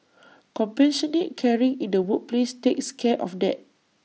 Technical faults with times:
2.03 concealed Bluetooth headset packet loss

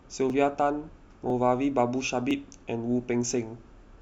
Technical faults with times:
0.30-3.31 periodic USB or driver dropouts

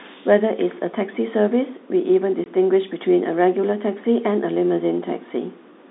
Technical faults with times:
2.44-2.46 packet loss filled with silence

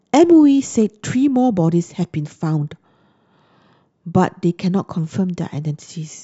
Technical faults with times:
none

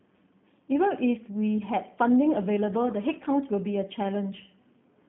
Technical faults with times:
0.00-5.08 G.729 codec

